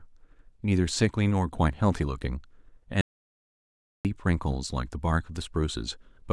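At 3.01 s the speech cuts off abruptly. This is an audio dropout to silence, lasting until 4.05 s. For just over a second there is nothing at all, not even room tone. The signal feeding the recorder was likely lost, through a failed connection or a brief mute, while silence kept being written. When the speech returns, it comes back mid-flow. Whatever was said in that second is missing.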